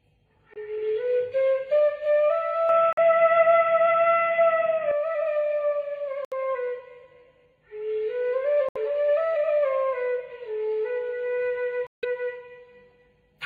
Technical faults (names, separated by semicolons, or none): corrupt frame muted; input switched to a poorer device